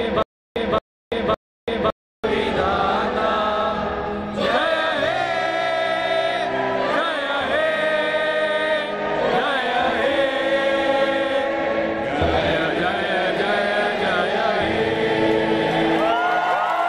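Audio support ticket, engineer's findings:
Stutter with silent gaps, 0.00 to 2.24 s, already under way at clip start. Likely a playback or stream stall, with each retry replaying the last 224 ms buffer fragment before running dry. Audible as the same short burst repeating three times, every 559 ms, separated by 335 ms of dead digital silence. The audio that should have played in those gaps is lost.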